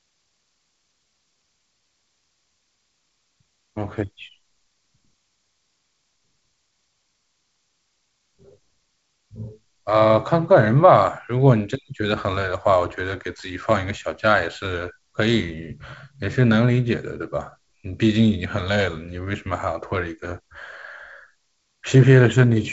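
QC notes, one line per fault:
Nothing stood out on listening to this wideband telephone speech.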